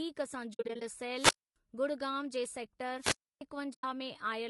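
Throughout the speech, the sound has a rough, grainy texture, with noise filling the gaps between the pitch harmonics and a thin, somewhat synthetic top band. This is most likely low-delay AAC compression of the AAC-ELD kind, with short frames that resolve harmonics poorly and leave too few bits at what sounds like a rate of about 32 kbps. The damage is plainly audible.

From 0.53 to 0.82 s, compressed frames go missing and the decoder zeroes their spectrum. This is AAC frame loss with muting. About 160 ms of audio drops out in several soft-edged holes scattered over roughly 280 ms, the longest near 70 ms. The overlapping windows fade each gap out and back in. The gap sizes point to frames of about 20 ms.

From 1.13 to 1.56 s, the radio signal of the wireless microphone fades until the receiver's squelch shuts the output. This is a wireless microphone squelch dropout. Hiss rises, then about 270 ms of near silence follows before the speech returns.

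The same squelch dropout happens again from 2.98 to 3.41 s. This time the mute lasts about 300 ms, with the same swell of hiss at its start.

From 3.73 to 3.84 s, AAC frame loss with muting recurs as one hole of about 100 ms, faded smoothly at both edges.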